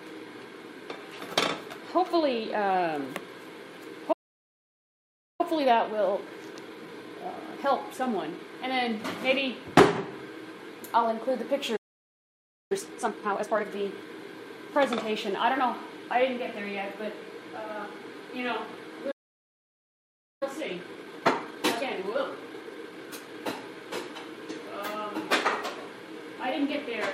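Three times the player likely ran dry of data or had its thread blocked, producing a playback stall: the audio cuts out mid-flow and goes silent from 4.12 to 5.41 s (about 1.27 s), 11.76 to 12.72 s (0.94 s) and 19.11 to 20.43 s (1.30 s). After each gap the player works off its backlog with time-compressed catch-up, trimming and cross-fading small slices so the sound runs hurried at unchanged pitch. This lasts from 5.41 to 8.41 s at 1.1 times speed, 12.72 to 13.66 s at 2 times, and 20.43 to 23.43 s at 1.25 times.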